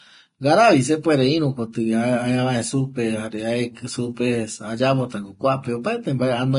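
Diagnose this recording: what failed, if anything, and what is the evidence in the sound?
Vorbis compression runs throughout the speech, likely at the codec stage: nothing survives above 10.5 kHz, and the remaining treble is hissy and grainy, with roughened tones and blurred attacks. The encoder quantises the residue so coarsely that fine detail becomes noise, which fits a low bitrate of about 30 kbps.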